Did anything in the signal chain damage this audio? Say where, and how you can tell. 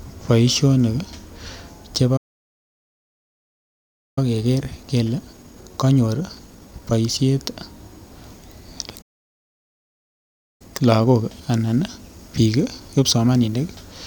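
Yes. The damage is at the playback stage, where two playback stalls cut the speech from 2.16 to 4.18 s (about 2.0 s) and from 9.01 to 10.62 s (about 1.6 s). Each gap begins mid-flow rather than at a natural pause. On the waveform these are flat, silent stretches with an abrupt edge. On a spectrogram they are solid blank columns across all frequencies. The likely cause is the player's buffer running dry or its output thread being blocked, so nothing reached the output until it recovered.

Right after each stall comes time-compressed catch-up. From 4.18 to 7.18 s the speech runs at 1.25 times normal speed, and from 10.62 to 13.62 s at 1.15 times, with pitch unchanged. The player is clearing its backlog by dropping small slices and cross-fading the joins. On a spectrogram, harmonics stay at the same frequencies while syllables are squeezed closer together. The waveform shows tighter envelopes.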